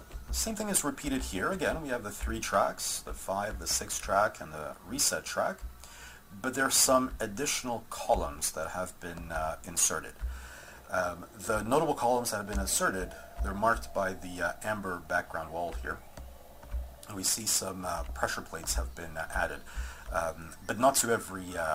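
Nothing stood out as a technical problem on listening to this audio.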